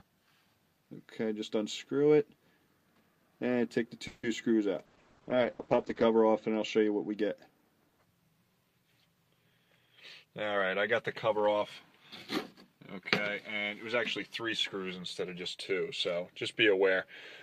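At 4.07 s a call audio freeze interrupts the sound for about 0.18 s. The likely cause is delayed packets draining the jitter buffer. The receiver extends the last sound for about 160 ms as a fading buzz or hiss, ending in a very brief silence of about 10 ms. Playback then resumes where it stopped, with nothing lost but everything after it shifted later. On a spectrogram this shows as a smeared, decaying band with no new onsets. The waveform's envelope tapers down and then restarts abruptly.

From 4.87 s to 7.22 s a call bitrate drop makes the audio rough and muffled. The encoder is forced down to a much lower rate, consistent with a fall from around 48 kbps to 9 kbps, and it holds its worst state for about 1.2 s. The audio bandwidth narrows from 20 kHz to 8 kHz. A spectrogram shows the top of the spectrum sharply cut off at 8 kHz, and the energy below it looks blotchy and coarsely quantised until the upper band returns.

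Two jitter buffer speed-ups follow. The first runs from 9.43 s to 10.70 s at 108% speed and removes about a tenth of a second. The second runs from 11.26 s to 11.55 s at 114% speed and removes around 50 ms. In both, the receiver trims short pitch-period slices to shed excess buffered delay, so the sound hurries forward while its pitch stays the same. On a spectrogram, harmonic lines keep their spacing while events crowd closer together in time. The waveform shows whole cycles dropped at the splice points.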